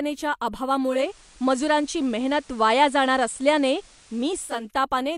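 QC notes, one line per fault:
0.82–4.73 s, digital radio blending to analogue: the receiver loses the digital stream and cross-fades over about 346 ms to the station's FM broadcast, then fades back. During the analogue stretch the speech carries a steady hiss floor roughly 30 dB below the signal, and the overall level shifts by about 3 dB.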